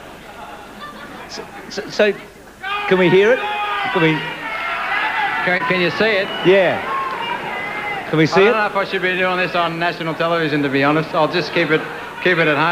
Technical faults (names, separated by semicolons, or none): short concealed packet loss